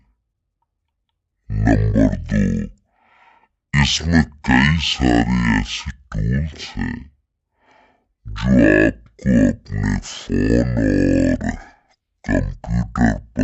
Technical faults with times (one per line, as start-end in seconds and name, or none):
0.00-13.43 stereo read as mono